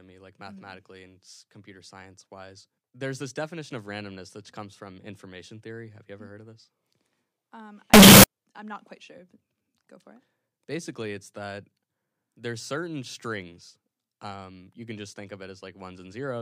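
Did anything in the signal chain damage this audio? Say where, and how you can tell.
Yes. From 7.94 to 8.24 s the speech turns into loud, harsh distortion in which soft and strong sounds come out equally loud, then it returns to normal. The likely cause is a sample-format conversion where signed and unsigned were mixed up, so the top bit of each sample is flipped and every zero crossing jumps across the whole range, which fits 16-bit samples. Clipping or overload would spare the quiet parts; this raises them to full loudness.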